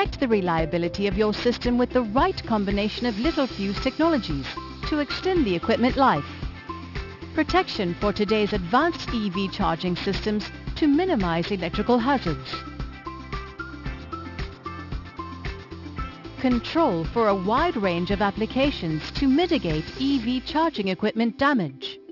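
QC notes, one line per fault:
Throughout: aliasing. The sound was resampled to a lower rate without an anti-alias filter first. Everything above 6 kHz, the new band edge, folds back down as false tones at pitches unrelated to the original. Sibilants and cymbals turn gritty or metallic. The folded energy sits roughly 20 dB below the signal. The spectrum runs hard up to 6 kHz and stops there, which fits a drop from 44.1 kHz to 12 kHz.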